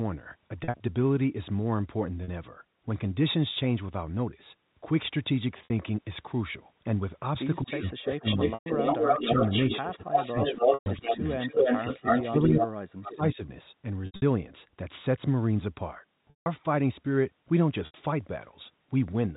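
Packet loss with pitch repetition first appears at 0.64 s. More follows at 2.24, 5.64, 8.54, 10.74, 14.06, 16.30 and 17.86 s. Each gap lasts 40 to 160 ms, which fits 20 ms packets. The last pitch period is repeated and faded, so short gaps sound held and buzzy. Longer ones fade briefly toward silence.

From 7.63 to 13.4 s, speech is likely suppressed in double talk, in spans at 7.63 to 8.82, 9.14 to 9.41, 9.78 to 11.26 and 11.8 to 13.4 s. The level dips by as much as about 35 dB.

Echo leak overlaps this, likely from a loudspeaker whose echo canceller let sound through. A copy delayed by about 270 ms is heard from 7.69 to 7.91 s, 8.25 to 12.67 s, and 13.04 to 13.35 s. In the long middle stretch it is roughly as loud as the direct sound.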